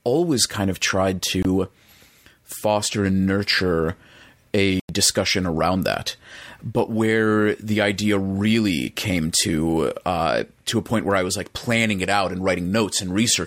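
A Bluetooth dropout hits the speech at 1.43 to 1.45 s, a hole of about 23 ms, and again at 4.80 to 4.89 s, lasting about 93 ms. Both gaps go silent, then the speech returns further along, as if it had kept playing. That is likely packets arriving at the headphones too late and being discarded, the first fitting a single lost packet and the longer one about four in a row.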